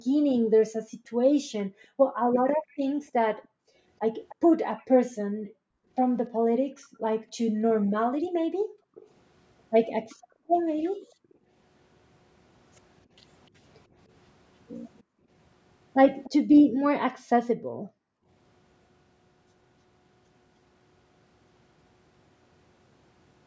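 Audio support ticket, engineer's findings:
Background gated by the echo canceller, 0.0 to 11.5 s and 15.03 to 18.28 s. Room tone ducks, at worst about 40 dB, then returns. Around five seconds affected in the first stretch, about 1.5 s in the second. Suppressor clamps the mic during far-end playback.

Echo leak at 2.34 to 4.84 s, 6.82 to 6.88 s, 8.95 to 11.35 s and 14.99 to 16.3 s. Faint delayed copy of the speech, 298 ms behind, roughly 20 to 35 dB down. Likely residual loudspeaker pickup the far-end canceller failed to remove.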